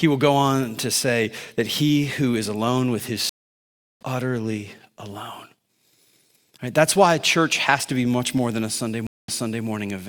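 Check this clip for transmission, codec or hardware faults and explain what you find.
Two stream reconnects break this speech clip. The first runs from 3.29 to 4.03 s, right after "is alone with his". The connection dropped and the player restarted its decoder mid-stream, so there is about 0.71 s of silence. The speech then picks up at "utterly alone", roughly 0.7 s later than where it stopped, so that stretch is lost. The second, from 9.07 to 9.66 s, has a 0.22 s gap. There the server resent buffered audio, and playback resumes 0.38 s earlier, repeating a short piece. Both restarts fade in on their first frame.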